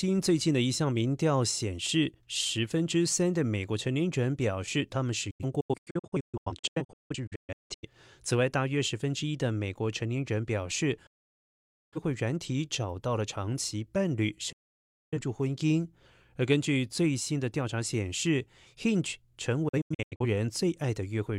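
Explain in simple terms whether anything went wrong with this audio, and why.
The speech keeps dropping into silence and then picking up again a moment later. Between 5.30 and 7.88 s it breaks into many short holes, the longest about 0.17 s. Solid gaps follow at 11.06 to 11.98 s and 14.52 to 15.18 s, and a last scatter of brief holes comes at 19.68 to 20.26 s. This is a digital broadcast dropout. The receiver lost good data and went quiet until clean frames arrived, so whatever was said in those gaps is gone.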